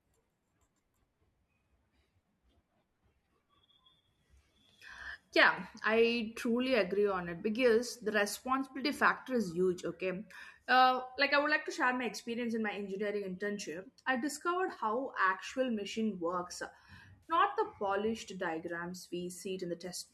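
A brief smeared, noisy and phasey patch interrupts the speech at 14.69 to 14.80 s, just after "I discovered", and again at 17.23 to 17.33 s, just before "the polished diagrams". Both are AAC frame loss with concealment: about 60 ms of audio went missing each time, and the decoder patched the gap by reusing and scrambling the last good spectrum. In the first event the losses are spread over about 80 ms, with the longest unbroken run around 40 ms. These gaps are too short for the fill to fade into silence, so they come across as blurred grit rather than dropouts. The light graininess underneath the speech likely comes from low-delay AAC compression.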